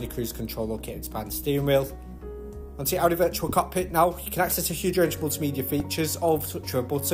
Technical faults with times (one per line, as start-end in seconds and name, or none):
4.51 repeated buffer
5.80 repeated buffer